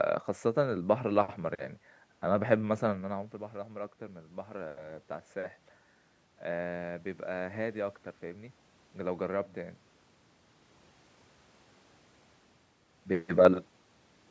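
From 3.09 to 5.64 s there is automatic gain rising. As the talker moves away around 3 seconds, the input drops by about 16 dB. The gain control slowly adds about 4 dB, so the voice and the room noise swell together.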